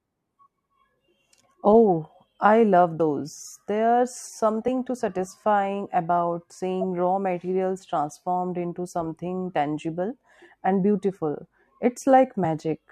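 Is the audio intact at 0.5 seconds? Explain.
Yes, at 0.5 seconds the speech plays cleanly with no dropout, click, distortion or other audible fault.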